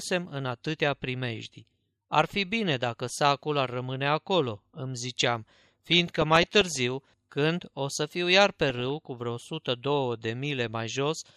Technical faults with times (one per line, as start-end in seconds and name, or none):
5.86-6.78 DAB burbling
8.69-8.90 DAB burbling